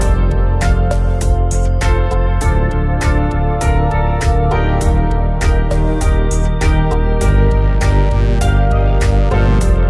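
No technical faults are audible anywhere in the recording.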